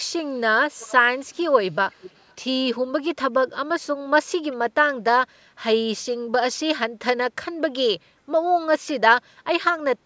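Early on there's a faint delayed copy of the speech trailing the talker by about 378 ms, which is an echo leak, likely from the far end playing the call on a speaker and its echo canceller not catching everything. It shows up at 0.8–0.92 s, 1.19–1.38 s, 1.75–2.35 s and 4.52–4.56 s. The first and third are roughly 25 dB down. The other two are barely there, roughly 40 dB down.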